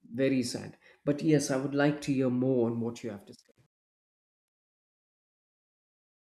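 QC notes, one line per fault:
2.63–6.21 s, truncation distortion on a fade: after "would like to hear" the fade-out starts to sound grainy, and from 3.67 s to the end it gets gritty. The fade stage keeps too few bits and adds no dither, which fits roughly a 10-bit path. As the level shrinks toward the smallest step, the waveform collapses into a few coarse square steps.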